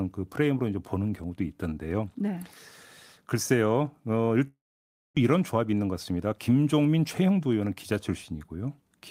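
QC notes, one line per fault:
4.47–5.19 s, long network dropout: speech stops, a fading buzzy tail then near silence, likely lost packets; about 0.4 s of audio never returns.
5.36–7.75 s, jitter buffer speed-up: speech sounds hurried at unchanged pitch, running about 11% fast as the receiver trims short pitch-period pieces to shed roughly 0.3 s backlog.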